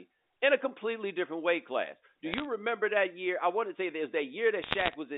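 From 2.32 to 2.45 s, before "remember that year I", and from 4.62 to 4.96 s, after "want to say there's", bit errors on a digital phone line corrupt single samples, scattering sharp ticks over the speech. The second, denser burst crackles more.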